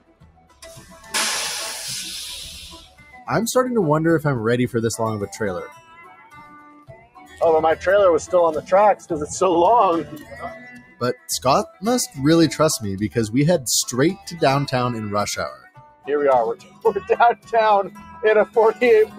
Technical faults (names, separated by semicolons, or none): noise suppressor applied to music or sounds; sound cut by the noise suppressor